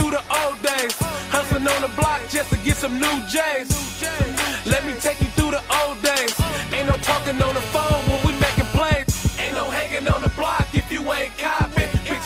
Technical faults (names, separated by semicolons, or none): GSM signalling bursts; GSM phone buzz